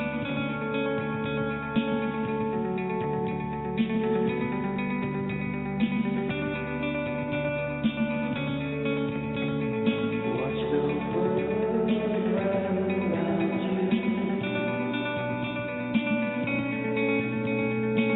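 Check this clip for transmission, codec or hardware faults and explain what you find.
No transmission, codec or hardware fault can be heard anywhere in the clip. There is nothing to report at any point in the recording.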